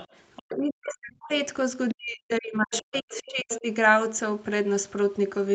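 From 0.00 to 0.17 s a second, fainter voice sits under the speech, about 20 dB down. It returns from 0.36 to 0.56 s, about 25 dB down. This is the other side's voice leaking through. Its likely cause is loudspeaker sound reaching the microphone that the echo canceller failed to remove.

From 0.39 to 1.31 s the speech itself sinks, dropping as far as about 40 dB. This is speech suppressed in double talk. Both sides were likely talking at once, and the echo canceller, unable to tell them apart, turned everything down. The main voice dips for about a second.

A short leak comes at 1.89 to 1.94 s, about 15 dB down. Right after, from 1.94 to 3.65 s, the speech is suppressed again for about 1.5 s in total, with dips near 40 dB. Inside that stretch the leaking voice grows louder, sitting only about 10 dB below the speech from 2.61 to 3.23 s and again from 3.49 to 3.60 s.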